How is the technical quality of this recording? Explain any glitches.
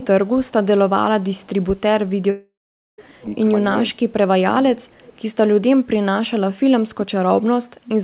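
It's a narrowband call recording, with nothing above 4 kHz, which fits a G.711 A-law telephone path. Three kinds of glitch come through: some echo, one long gap, and a couple of spots where the speech gets squashed.

Echo leak shows up at 0.00–0.07 s, 0.46–0.52 s, 1.33–1.47 s and 4.92–5.19 s. You get a faint delayed copy of the speech trailing about 337 ms behind, sitting roughly 20 to 35 dB under the main signal. Likely the far end's echo canceller didn't fully remove what its loudspeaker fed into its mic.

Long network dropout runs from 2.30 to 2.99 s, so roughly 0.7 s of audio never arrives. The receiver likely stretched the last sound into a fading buzz, then left about half a second of silence before the speech picks up again, minus the missing chunk.

Speech suppressed in double talk hits at 3.90–4.28 s and 4.74–4.89 s. The speech dips by around 15 dB in patches, sounding pulled back. 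That's likely the echo canceller clamping down because both sides were talking at once.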